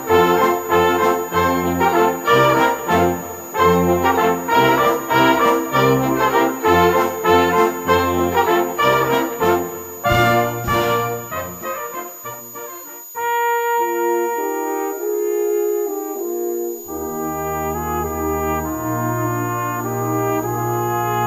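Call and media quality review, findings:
Switching supply whistle, throughout. High steady tone near 7 kHz, wandering between about 6.76 and 6.87 kHz, roughly 15 dB below the signal. Probable component: switching power supply in audible burst mode or beating against another supply, pitch shifting with load.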